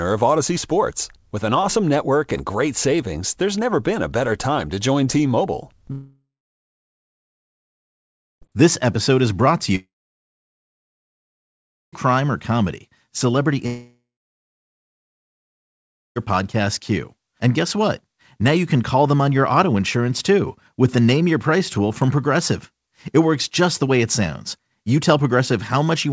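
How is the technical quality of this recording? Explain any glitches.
The recording has three clear gaps where the audio cuts out for over two seconds at a time, from 5.92 to 8.43 s, from 9.75 to 11.94 s, and from 13.66 to 16.18 s.

Each gap starts with the last sound smearing into a brief fading buzz, then about two seconds of silence before speech resumes with material skipped. That is likely a long network dropout: packets stopped arriving, the receiver briefly extended the final sound, then gave up.

The audio has nothing above 8 kHz, which fits a wideband call codec such as 64 kbps G.722.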